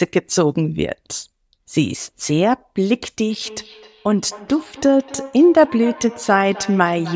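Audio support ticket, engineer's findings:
Feedback echo between two devices, 3.3 s to end. Speech returns roughly every third of a second, thinner and ringier each pass, peaking about 18 dB under the direct speech. A second device in the room is replaying the call into this microphone. The local echo canceller only removes its own playback.

Call microphone processing audible too. Lowest bass removed by its high-pass filter. Nothing above 8 kHz.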